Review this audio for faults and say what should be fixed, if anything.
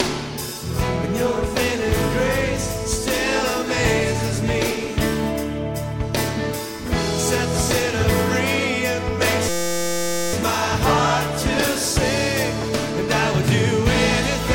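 From 9.49 to 10.33 s the sound locks into a steady, harsh buzz at 172 Hz, a tiny 5.8 ms fragment repeating exactly, well over a hundred times, before playback resumes with almost nothing missing. This is a system hang loop: the computer or driver stalled while the sound hardware kept replaying the same short ring buffer, which fits a 256-sample buffer. To prevent it, fix the driver or system stall and have the output mute or clear its buffer when it stops being refilled.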